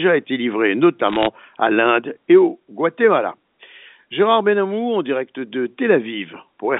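A burst of sharp ticking crackle runs over the French speech from 1.08 to 1.27 s, just after "été livrés": bit errors on a digital phone line, under one percent of bits flipped, each corrupting a single sample, all heard through the G.711 telephone band of 150 Hz to 3.6 kHz.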